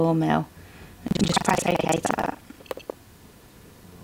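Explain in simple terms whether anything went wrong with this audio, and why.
Something did go wrong: from about 1.07 s to the end there's a steady rattle of about 23.4 Hz, which is buffer tearing. The playback buffer, likely 2048 samples, slipped out of sync, so roughly half of each chunk replays sound from about 150 ms earlier, with hard joins.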